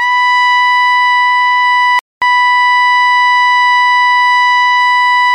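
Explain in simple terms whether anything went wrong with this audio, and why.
At 1.99 seconds the music suddenly cuts out. Everything goes silent for about a quarter of a second, until 2.22 seconds. Then the music starts again. This is a playback stall. The player most likely ran short of audio data, or was briefly held up by something else on the device, so it had nothing to send to the speakers. The gap lasts about 0.23 seconds. It is long enough to hear clearly as a hiccup in the music.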